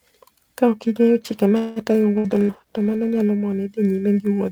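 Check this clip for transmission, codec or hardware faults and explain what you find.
There are four kinds of fault here, three of them bunched between about 1.6 and 3.3 s, plus one that runs the whole way through.

Periodic clock jitter is present throughout. Something is wobbling the converter's clock at around 2 kHz, so every part of the speech picks up sidebands spaced that far either side. You hear it as a gritty, metallic edge riding on the speech, strongest on bright sounds.

A call audio freeze runs from 1.57 to 1.79 s, right after "ing'eyo chike". The sound hangs and is stretched out as a fading buzz for about 190 ms, then carries on from exactly where it stopped, with nothing skipped. The likely cause is delayed packets draining the jitter buffer.

A call bitrate drop runs from 2.03 to 3.33 s. The encoder was pushed from 32 kbps down to 14 kbps and sat at the bottom for about 1.2 s. 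The coarser coding makes the speech rougher and watery until the rate climbs back.

Two bursts of packet loss land inside that low-bitrate stretch, at 2.18–2.27 s and 2.42–2.52 s. Each drops about 60 ms of audio, which the receiver papers over by extending the last sound as a fading buzz or hiss. When the audio picks up again, that chunk is simply gone.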